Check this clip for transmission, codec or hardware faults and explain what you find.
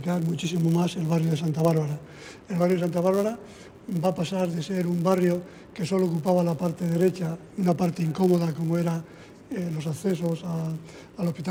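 There is one fault, present from start to finish: a filter restarted on every block. Through the whole clip a buzz at 100 Hz sits under the sound, which points to processing blocks of 10 ms. The filter discards its stored state at each block boundary and starts again from silence, so every block opens with a small transient. Unlike mains hum, this buzz rises and falls with the level of the audio.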